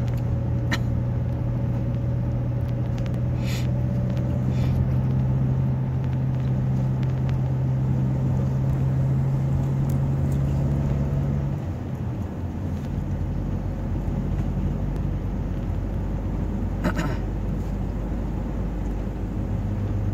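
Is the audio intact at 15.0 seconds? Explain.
No. At 14.96 s there is a single sharp click, a thin vertical line across the spectrum. The likely cause is dropped samples: under a millisecond of the stream is missing, so the waveform jumps abruptly to a later value without removing any audible sound.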